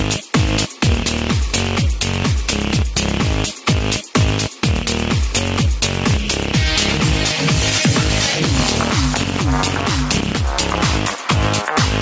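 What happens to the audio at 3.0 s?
At 3.0 s the level is breathing: loud and soft passages sit unnaturally close together and the sound feels squashed. This gain pumping runs through the whole clip, not just this moment, with the level swinging by roughly 5 dB. The likely cause is input gain set far too high for the microphone, with a fast limiter or compressor clamping down on every peak and releasing in the gaps.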